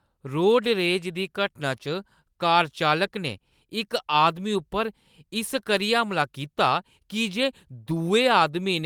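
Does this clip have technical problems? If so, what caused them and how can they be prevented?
No, nothing in this speech recording points to a technical fault, so there is nothing to trace back or prevent.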